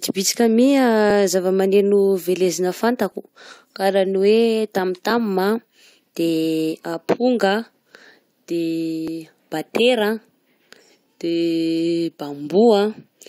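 Speech has small skips at 1.10–1.12, 3.12, 5.11, 7.09, 9.08 and 11.06 s, every 2 s. Overlap between stream segments trims real audio, so the waveform jumps.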